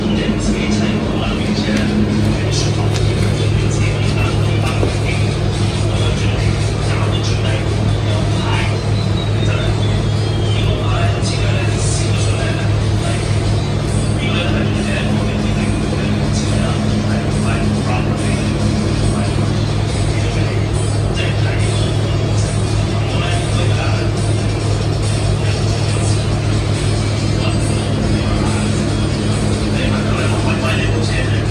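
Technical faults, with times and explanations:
No technical faults are heard in this audio.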